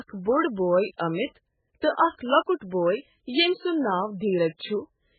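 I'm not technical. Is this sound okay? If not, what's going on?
No. From start to finish this speech has the muffled, watery quality of very heavy MP3 compression, likely from being saved at a very low quality setting. Everything above about 4.5 kHz is missing, so the crisp top end of speech, such as s and t sounds, is gone. Quieter details flicker in and out, giving a swirly, underwater texture, and the starts of sounds come across smeared rather than clean.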